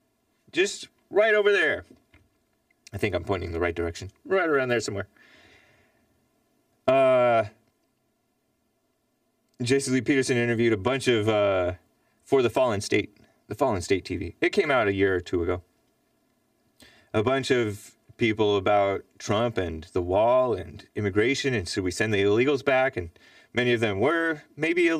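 Throughout, one channel lags the other by roughly 3 ms before the mono sum, producing channel delay comb filtering, with notches from around 150 Hz that leave the speech hollow and phasey.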